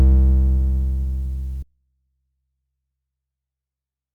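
At 1.63 s the music cuts out abruptly and stays gone to the end of the clip, an audio dropout to a faint residue. The break is instant rather than a fade, and what fills the gap is only a faint trace of the music, roughly 40 dB below its earlier level. The likely cause is a lost signal feed upstream while the downstream path stayed live, letting a small leak through.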